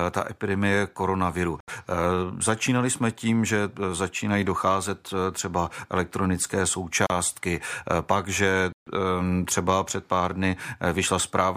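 At 1.60 s, 7.07 s and 8.72 s the speech drops to silence for about 74 ms, 33 ms and 140 ms, then resumes where it stopped. These are likely Bluetooth stalls, with interference delaying packets until the headphone buffer ran empty.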